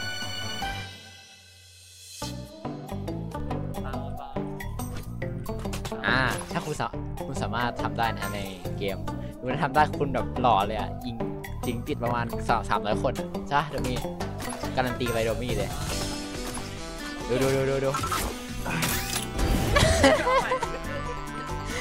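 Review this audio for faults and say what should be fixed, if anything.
Nothing here needs fixing; no faults were found.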